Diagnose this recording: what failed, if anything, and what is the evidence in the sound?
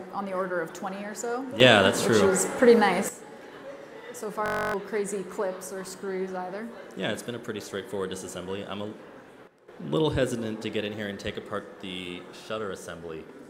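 Sudden gain jump, at the digital gain stage: from 1.60 to 3.09 s the level rises by about 12 dB, and from 9.47 to 9.68 s it drops by about 12 dB. Background noise steps with the sound. That rules out an AGC or compressor, which would ramp. A setting was likely applied without a ramp.

System hang loop, in the driver or buffer stage: from 4.46 to 4.74 s one 21.33 ms piece repeats exactly 13 times. It makes a steady buzz at 46.9 Hz, which fits a 1024-sample buffer, and roughly 300 ms of audio is lost. Codec concealment would vary or fade. These repeats are identical.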